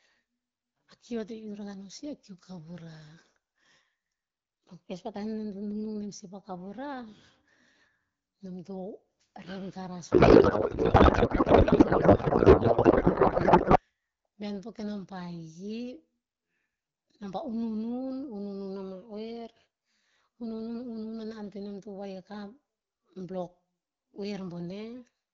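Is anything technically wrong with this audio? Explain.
Yes. There is a codec payload misread from 10.11 s to 13.80 s, starting just after "rep garas" and ending before "bihaen po kenom pa". The sender and receiver disagree on how the AMR bits are packed. The sound points to octet-aligned frames being read as bandwidth-efficient. The decoder takes each field from the wrong place. The speech turns into garbled noise and warble that barely follows it. Clean AMR wideband audio returns after 13.80 s.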